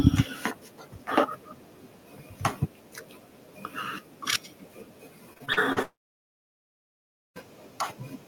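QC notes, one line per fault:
5.33–5.78 s, repeated packet loss (robotic sound): several short holes, the longest about 39 ms, punch through the sound, with roughly 140 ms missing in total. Each hole is bridged by stretching the preceding sound, so the passage turns choppy with pieces missing, with concealment covering about 29% of it.
5.82–7.38 s, long network dropout: about 1.5 s of audio is absent. A brief smeared continuation of the last sound fades out, leaving about 1.45 s of near-silence before the signal resumes without the lost material. This likely comes from a sustained break in packet delivery.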